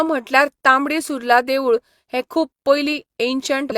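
Damaged data in the compressed stream at 3.67 to 3.73 s: corrupted frames throw the decoder out of sync, producing a brief glitch near the end of the speech.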